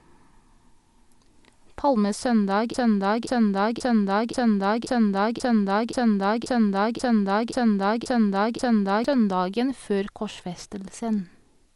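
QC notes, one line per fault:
Throughout: Dolby Digital compression. The speech is dull, with nothing above 11.4 kHz, and a rough, fluttering noise hangs around voiced tones. The damage is plainly audible and sounds like AC-3 style coding at a low bitrate, likely around 64 kbps. At that rate the encoder trims the top of the band and starves many frequency lines of mantissa bits. The decoder fills those empty lines with dither noise, producing the grainy shimmer.
2.74–9.04 s: broken-record loop. A fragment about 0.53 s long repeats exactly, back to back, 12 times, for roughly 6.3 s. The stutter is mechanical and identical on each pass, with no variation. The likely cause is a player, encoder or stream stalling and resending the last chunk it held in its buffer. Whatever speech should have played during those six seconds never arrives and is lost.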